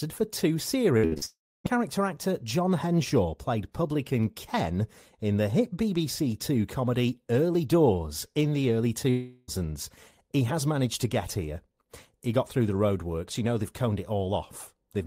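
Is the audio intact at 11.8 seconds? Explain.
Yes, the speech at 11.8 seconds is intact, with no audible fault at that moment.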